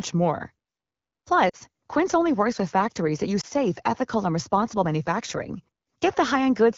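Brief dropouts at 1.49 to 1.56 s and at 3.41 to 3.46 s, between "with factories that use" and "ethical and responsible manufacturing", are lost AMR speech frames. Their 40 ms and 20 ms lengths fit two frames and one frame. Corrupted frames were concealed by repeating the last good settings at falling gain.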